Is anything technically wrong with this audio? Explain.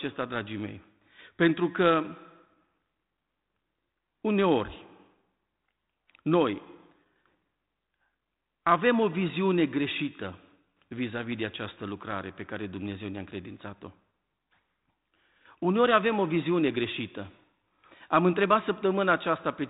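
No, nothing is wrong: this is speech over a 32 kbit/s G.726 ADPCM telephone path, so the band stops near 3.9 kHz and the light coding noise is normal for that codec.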